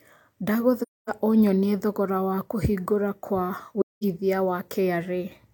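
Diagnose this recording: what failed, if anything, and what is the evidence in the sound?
The codec stage failed, with AAC frame loss and muting. The speech drops into silence from 0.80 to 1.10 s, and again from 3.80 to 4.04 s. The gaps last about 256 ms and 213 ms, which fits runs of six and five lost frames. The decoder zeroed the missing frames' spectrum. The overlapping windows fade the sound out and back in, so each hole has soft edges.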